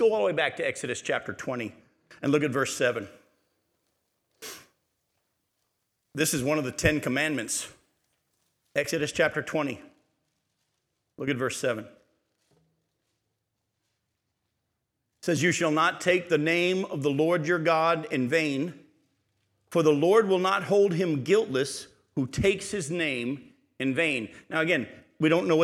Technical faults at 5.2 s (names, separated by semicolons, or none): pre-emphasis left on